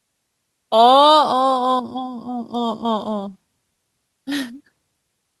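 No audible fault anywhere in the recording: level, timing and continuity hold steady throughout.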